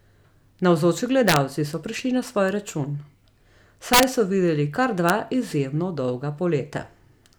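Integer overflow: loud peaks exceeded the largest integer and wrapped to the opposite sign instead of being limited, so the waveform flips across full range. This gives violent cracks in the speech at 1.28–1.36 s, 3.93–4.03 s (about 4 dB over) and 5.09 s.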